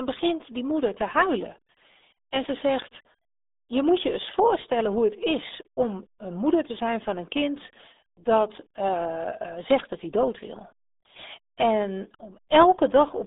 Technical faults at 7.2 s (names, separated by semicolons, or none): RealAudio 14.4 codec